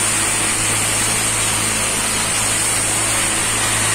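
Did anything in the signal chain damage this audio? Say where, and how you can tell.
Yes: hard clipping, present throughout the clip. The loudest moments carry a crackly distortion on their peaks, which fits a signal driven about 6 dB beyond what some stage could pass. That stage may be a converter, a number-format conversion or another point in the chain. Only a small fraction of samples, around one or two percent, exceed the limit. Those peaks get sliced flat, and the squared-off tops add high harmonics.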